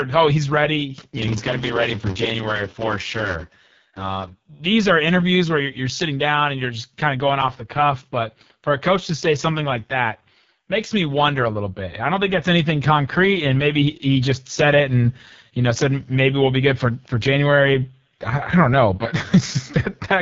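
Speech runs throughout with AMR wideband (HD Voice) codec damage: heavy roughness and rasp, which fits AMR-WB's lowest 6.6 kbit/s mode. A spectrogram shows a hard ceiling near 7.1 kHz, with smeared, noise-like texture filling the top band above about 6.4 kHz.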